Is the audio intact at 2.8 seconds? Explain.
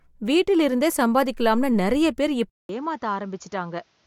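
No. From 2.50 s to the end, right after "வீட்டிலிருந்தே சம்பாதிக்கலாம்னு நிறைய பேர்", there is a gap of about 0.20 s, then the sound returns dull, roughly 10 dB quieter, with nothing above 7.1 kHz and a new hiss roughly 35 dB under the speech. The likely cause is an input switched to a poorer device. A simple bandwidth drop would not shift the level and noise floor together like this.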